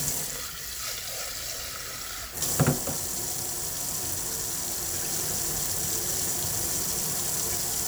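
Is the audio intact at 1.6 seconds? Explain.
No. At 1.59 s the sound jumps ahead. About 10 ms is missing, with no silence. The likely cause is a dropped buffer (overrun). The hardware overwrote samples before the program collected them, and the two sides were joined directly.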